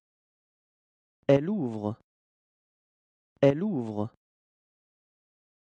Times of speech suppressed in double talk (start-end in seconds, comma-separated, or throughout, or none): none